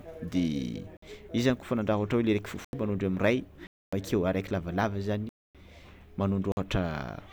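Blocks of digital silence hit at 0.97, 2.65, 3.67, 5.29 and 6.52 s, lasting 50 to 256 ms, the 3.67 s gap falling just before "araiky lavalava". Likely unfilled output buffers zeroed the samples, so the speech stops dead. The waveform shows flat lines, and the spectrogram shows blank vertical bands.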